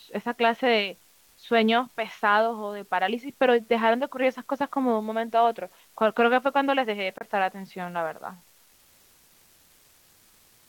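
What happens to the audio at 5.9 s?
At 5.9 s the speech carries the same steady crackling fizz heard from start to finish, caused by an unreliable data bit. One marginal data line flips its bit in a random share of samples, so each error lands as a spike of identical size. Unlike a stuck bit, which distorts the waveform in step with the signal, these spikes scatter at random and keep fizzing through the pauses between phrases.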